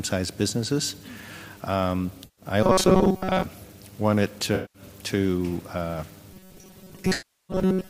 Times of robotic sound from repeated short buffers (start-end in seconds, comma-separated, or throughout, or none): 2.63-3.44, 6.33-7.89